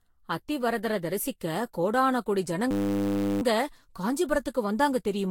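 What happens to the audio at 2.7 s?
At 2.71 s a system hang loop begins and runs until 3.42 s. The machine stalls while the sound hardware keeps replaying one 10 ms slice of its buffer, producing a steady 100 Hz buzz. On the waveform, an identical short cycle repeats end to end. On the spectrogram, flat horizontal stripes sit at 100 Hz and its harmonics.

Throughout this stretch, as across the whole speech clip, the sound is swirly, smeared and hollow, likely from generation loss after repeated lossy encoding. The spectrogram shows nothing above 16.7 kHz.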